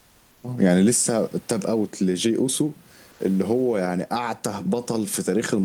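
Comfort noise replaces the background at 0.00–0.43 s and 3.11–3.19 s, likely from Opus DTX: a steady, featureless hiss about 2–3 dB quieter, not a gate's silence.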